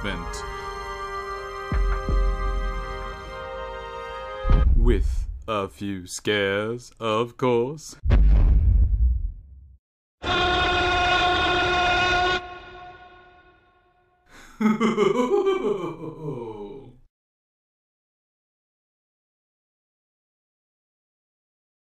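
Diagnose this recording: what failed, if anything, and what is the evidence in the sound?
Compressed frames skipped at 3.11, 4.62, 8.83 and 11.1 s, a codec or storage fault. The sound jumps ahead by about 150, 200, 100 and 100 ms as whole 23.2 ms frames go missing or are rejected.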